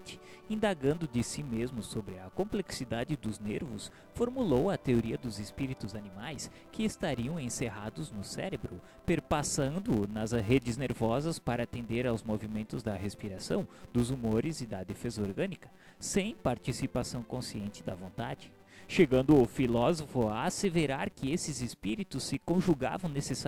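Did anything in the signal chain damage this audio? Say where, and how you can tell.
Yes. A filter restarted on every block: somewhere in the block-based processing, a filter discards its internal state at each block boundary and begins again from silence, so every block opens with a small transient. Throughout the recording this adds a steady buzz at about 188 Hz that rises and falls with the signal's level. That rate fits a 256-sample block at a 48 kHz sample rate.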